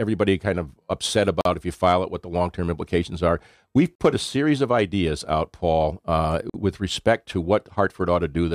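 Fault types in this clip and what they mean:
Gap between chunks: the speech was delivered in 2.5 s blocks, and each join was played with 44 ms of silence inserted, so the flow breaks with a hard-edged hole at 1.41, 3.95 and 6.50 s, the first right after "kind of upset".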